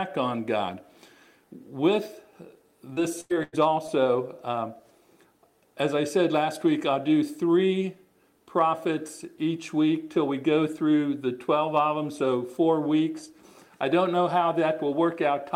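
From 2.93 to 4.01 s the sound turns choppy and robotic. This is repeated packet loss: gaps up to 95 ms are patched by stretching earlier sound.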